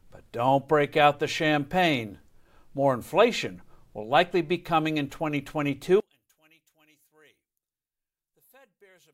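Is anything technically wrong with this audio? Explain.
Yes. From 6.00 s to the end, the speech suddenly falls by about 34 dB and almost disappears. The likely cause is one channel inverted. With reversed polarity, the content shared by both channels cancels when they combine, leaving only a faint trace.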